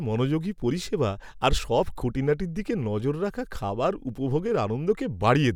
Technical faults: none

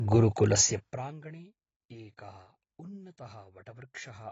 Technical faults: AAC compression; zipper noise

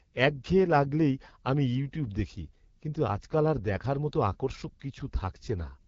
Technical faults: AMR wideband (HD Voice) codec

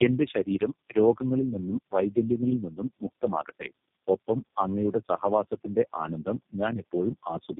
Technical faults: tandem speech coding

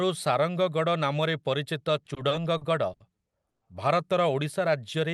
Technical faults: repeated stalls (stutter); call audio freeze

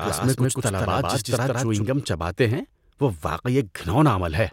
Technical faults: doubled audio track

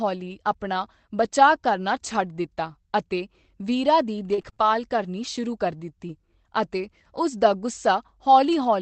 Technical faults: short concealed packet loss; repeated packet loss (robotic sound)

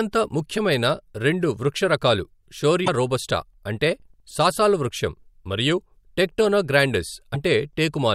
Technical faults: broken MP3 bit reservoir

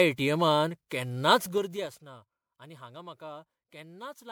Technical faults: generation loss; zipper noise

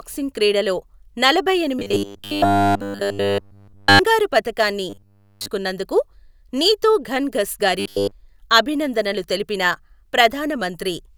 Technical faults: robotic sound from repeated short buffers

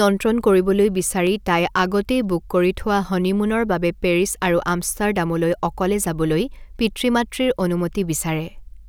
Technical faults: dropped samples

